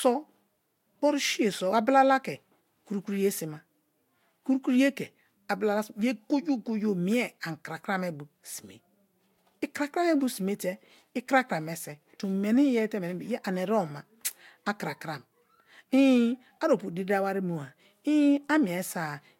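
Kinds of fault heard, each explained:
No technical faults can be heard in the speech recording. The sound holds steady throughout, with nothing that breaks into it or changes its character.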